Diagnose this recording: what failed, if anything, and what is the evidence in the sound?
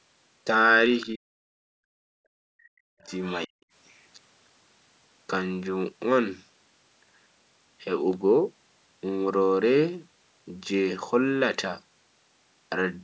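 In the call processing, the echo canceller likely failed to remove all of the loudspeaker signal from the microphone, so the other side's voice leaks through. A faint second voice, about 20 dB below the talker, appears from 0.93 to 1.07 s and from 3.02 to 3.37 s.

Speech suppressed in double talk also comes from the call processing. With both sides active, the canceller likely could not separate its own talker from the echo and clamped down on both. The talker's voice dips by up to roughly 40 dB from 1.13 to 1.48 s, 2.49 to 3.11 s and 3.47 to 3.55 s.

The background is gated by the echo canceller. During loudspeaker playback it turned the microphone down hard, and the room sound drops by about 40 dB from 1.76 to 2.21 s, roughly half a second. The room sound returns once the canceller releases.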